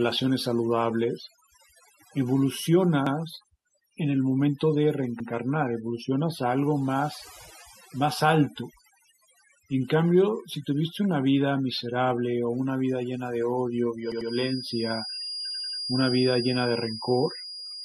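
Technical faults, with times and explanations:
Throughout, overdone noise removal: the noise reducer is set too hard, so it clamps down on every band that looks like hiss, and quieter parts of the speech get pulled out too. The background drops and breaks up into little twinkly specks.
3.07–3.16 s, 5.20–5.29 s, 14.12–14.30 s and 15.51–15.79 s, repeated buffer: fresh audio didn't arrive in time, so the playback device replayed the last chunk, about 93 ms long, which fits a 4096-sample buffer. It plays twice at the first two spots, three times at 14.12 s and four times at 15.51 s. Each repeat gives a hard-joined stutter, and nothing seems to go missing.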